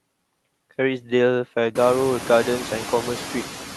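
Noise suppressor artifacts run throughout the speech: the suppressor pulls down whatever bands it judges to be steady noise, by about 7 dB, so the room noise dips in the gaps and surges back under each phrase, most noticeably after it rises sharply around 2 s.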